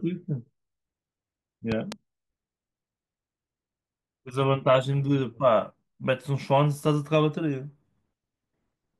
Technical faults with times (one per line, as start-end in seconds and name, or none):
1.72-1.94 loud pop